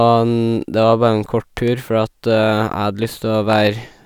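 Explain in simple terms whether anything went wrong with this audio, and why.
A loud pop, a double one at 1.57–1.70 s and a single one at 3.53–3.55 s, sits over the speech, most likely from a sudden electrical spike such as a plug or switch.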